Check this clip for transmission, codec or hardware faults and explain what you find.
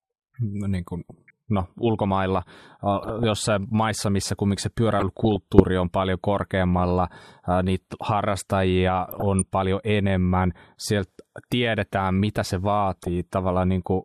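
The speech carries one transmission fault, DAB burbling, at 1.09–1.30 s, 3.03–3.24 s (just before "jossain maissa missä kumminkin"), 5.00–5.60 s, 6.77–6.93 s (after "on paljon"), 9.11–9.42 s and 12.94–13.08 s (after "sieltä tiedetään mitä se"). Weak reception lets roughly a few bit errors per thousand past error correction, corrupting sub-band data and causing short noise blips.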